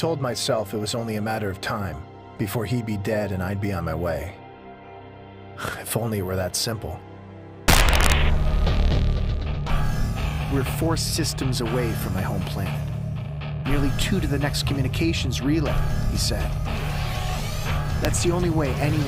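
Integer overflow produces violent cracks from 7.68 to 8.12 s, overdriven by about 2 dB, and at 14.02 and 18.05 s, where wrapped peaks flip sign instead of flattening like clipping.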